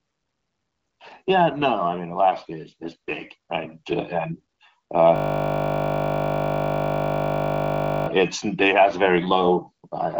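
From 5.16 to 8.08 s, a system hang loop trapped the hardware replaying one 20 ms buffer, turning the speech into a steady 50 Hz buzz.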